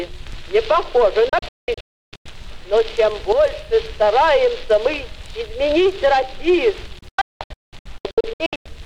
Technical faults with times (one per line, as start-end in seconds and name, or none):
1.29-2.26 digital broadcast dropout
6.99-8.66 digital broadcast dropout